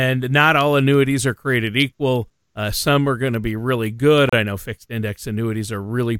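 A speech clip with a gap between stream segments at 4.29 to 4.33 s: a hard-edged silent hole of 34 ms. Two segments' time stamps fail to meet, and the player pads the gap with silence. Nothing is lost; 34 ms is added, consistent with a 2-second segment boundary.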